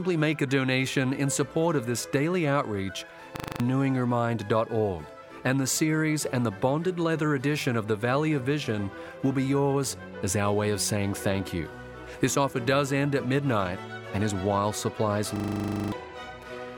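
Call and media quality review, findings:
System hang loop at 3.36–3.60 s and 15.36–15.92 s: a 40 ms slice repeats exactly, 6 then 14 times, giving a 25 Hz buzzy stutter. Host or driver stalled while the audio hardware kept replaying its ring buffer. Roughly a fifth of a second lost, then about half a second.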